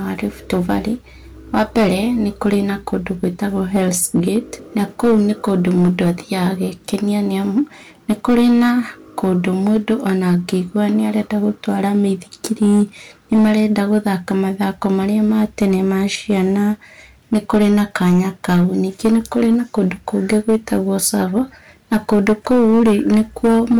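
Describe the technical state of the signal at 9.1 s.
At 9.1 s the speech is hard clipped, as it is for the whole clip. The signal is driven about 9 dB past the stage's ceiling, so roughly 4 percent of samples are flattened at the limit. Those squared tops add high harmonics, heard as harsh fuzz on louder syllables.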